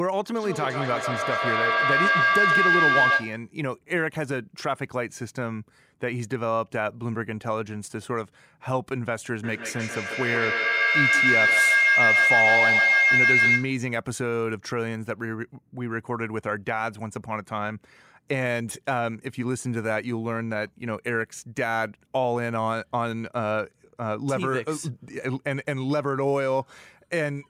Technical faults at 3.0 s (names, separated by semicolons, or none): feedback howl